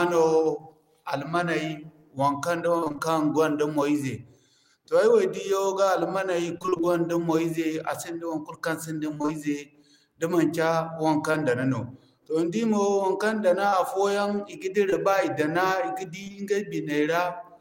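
Choppy, robotic-sounding bursts break up this speech recording at 2.77–3.00 s, 6.58–6.93 s, 9.14–9.30 s and 16.24–16.36 s. In each burst roughly half the stretch is patched audio. This is repeated packet loss (robotic sound): holes of about 20–30 ms arrive in quick succession, and each is filled by extending the preceding sound, giving a choppy, stuttering texture. Briefer smears or wobbles occur at 11.32–11.36 s, 13.70–13.74 s and 14.90–14.94 s. These are short concealed packet loss, where about 20 ms failed to reach the decoder in time and was synthesised from the preceding sound before blending back into the real audio.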